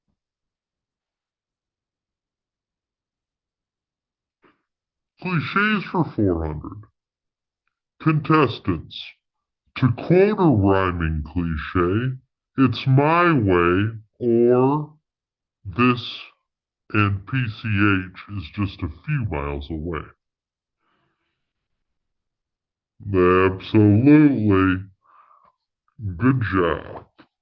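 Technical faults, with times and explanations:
Throughout, wrong sample rate: the speech runs at two-thirds speed and sits 7 semitones low, which fits 24 kHz audio played at 16 kHz without conversion. Tempo and pitch drop together by one ratio, unlike a pitch shift or time-stretch, which alter only one.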